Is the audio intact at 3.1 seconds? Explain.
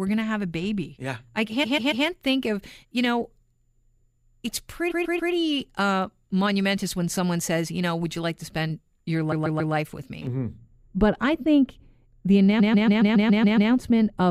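Yes, at 3.1 seconds the speech plays through intact, with no audible dropout, glitch or other fault at that moment.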